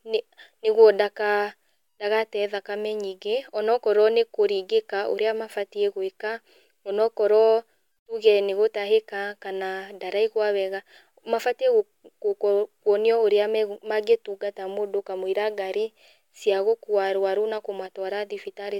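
No technical faults are audible.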